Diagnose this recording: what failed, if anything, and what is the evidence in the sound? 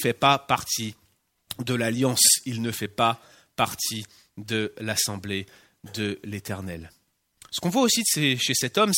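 No failure detected in this recording.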